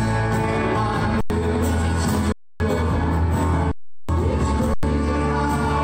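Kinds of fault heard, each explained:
Underrun with held sample: the buffer emptied, so the last value was held. Four flat gaps, 90 to 370 ms.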